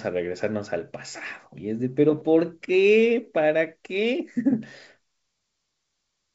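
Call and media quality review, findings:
No findings for call and media quality; the G.722 wideband path at 64 kbit/s carries the speech with at most a faint hiss in the upper band.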